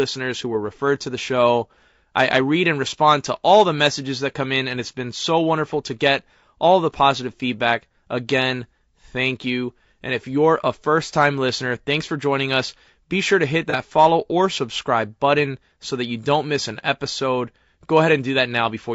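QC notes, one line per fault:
throughout: low-delay AAC compression. The speech sounds rough and grainy, with noise filling the gaps between harmonics and a thin, synthetic-sounding top band. This is likely AAC-ELD at around 32 kbps, whose short frames smear pitch detail. A spectrogram shows blurred harmonic lines and speckled noise between them.
13.70–13.75: AAC frame loss with concealment. Between "sure to hit" and "follow or subscribe button" there is a brief smeared, noisy patch lasting about 30 ms, which fits a single lost frame. The decoder rebuilt it from the previous spectrum. A spectrogram shows a short block of flattened, noise-like energy that breaks the harmonic lines.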